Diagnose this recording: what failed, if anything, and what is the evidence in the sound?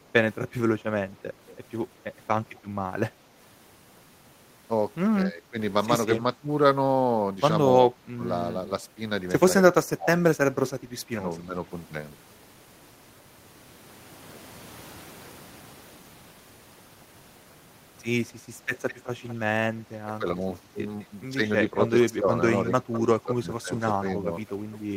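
The failure is in call processing, at the echo canceller. Background gated by the echo canceller shows at the very start, 0.0 to 0.1 s, where the room sound dips by about 6 dB for roughly 70 ms. The canceller briefly clamped the microphone path while the far-end loudspeaker was active.

Echo leak appears as a delayed copy of the speech from 1.47 to 2.59 s (231 ms behind, about 25 dB down), 18.88 to 19.35 s and 20.99 to 24.78 s (both 206 ms behind, about 20 and 15 dB down). The likely cause is the loudspeaker side's canceller failing to subtract all of its own playback before sending.

Speech suppressed in double talk occurs at 5.24 to 8.22 s and 9.83 to 11.54 s, where the talker dips by around 20 dB for roughly 0.7 s in each span. From 19.75 s to the end it drops by around 15 dB. With both sides speaking, the canceller likely mistook near-end speech for echo and attenuated it.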